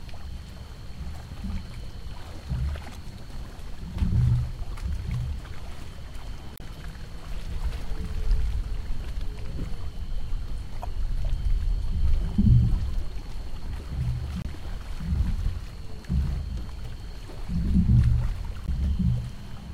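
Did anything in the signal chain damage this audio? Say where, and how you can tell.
Yes, damaged data in a compressed stream at the codec or storage stage: 2.92–2.96, 6.55–6.61, 10.80–10.85, 14.41–14.46 and 18.65–18.69 s. Misread frames make the decoder lose sync and search for the next header, leaving brief vertical spectrogram disruptions and abrupt waveform breaks.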